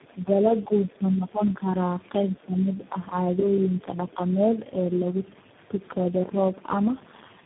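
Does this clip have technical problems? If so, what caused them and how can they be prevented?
Yes. Tandem speech coding runs through the whole clip. The speech is rough, muffled and warbly, with nothing above 3.8 kHz. This points to about four speech coders in a row, each re-coding the previous one's damaged output. Prevent it by passing compressed speech between networks without decoding and re-encoding it.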